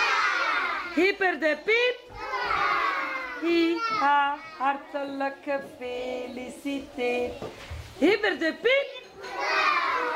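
No technical faults are audible.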